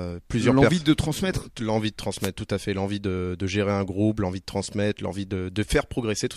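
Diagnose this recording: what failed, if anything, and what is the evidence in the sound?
A short burst of static swishes over the speech from 2.19 to 2.30 s, about 0.11 s. This is a wireless microphone noise hit in the analogue radio link ahead of conversion: reflections cancelled the FM signal, and receiver noise rose through the fade.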